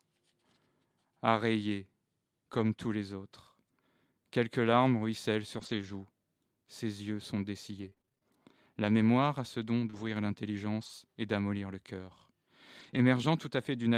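At 2.53 to 2.67 s, a lost packet rebuilt from error correction shows up as a brief rough, noisy patch in the speech with no dropout. About 80 ms of audio, consistent with four separate 20 ms packets, went missing. Each following packet carried a low-bitrate redundant copy, and the decoder played those copies in place of the originals. Continuity is preserved, but the texture coarsens for that short stretch.

From 5.57 to 12.98 s, scattered short gaps occur roughly ten times, one here and one there, the longest around 30 ms. About 240 ms of audio was missing or late in total, and the receiver concealed about 440 ms by extending the preceding sound, adding 21 ms to the timeline. Only about 3% of this span is concealed, so the speech is mostly clear between the gaps but picks up brief ticks, smears and hiccups where each hole was patched.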